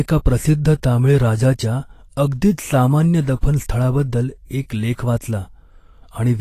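A speech recording marked throughout by what sounds like Vorbis compression. The treble turns hissy and grainy, consonant attacks blur, and nothing survives above 14.2 kHz, likely from a low bitrate around 34 kbps. A spectrogram shows a hard shelf at that cut-off and speckled noise replacing the upper harmonics.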